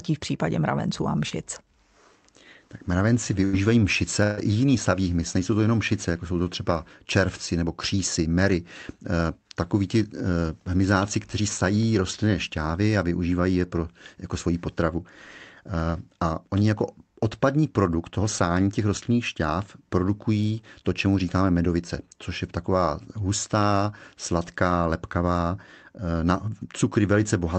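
At 1.29 to 1.33 s a brief smear passes through the speech, a wobble where about 20 ms of the call went missing. This is short concealed packet loss: the packet never reached the decoder in time, so the receiver continued the preceding sound for roughly 14 ms and then blended back into the real audio. The patch is short enough that it reads as a blip rather than a dropout.

Two longer holes follow. From 3.45 to 3.55 s the last sound is held and fades, and then the speech resumes slightly further along. The same happens, longer, from 4.23 to 4.39 s, where about 140 ms is replaced by a stretched continuation that dies away without ever going fully silent. Both are bursts of packet loss: several packets in a row arrived too late or not at all. The receiver extended the last sound and turned it down as each gap went on, so about 80 ms and 140 ms of the original speech are simply gone. Through the call path the audio carries Opus coding noise and stops at about 8 kHz.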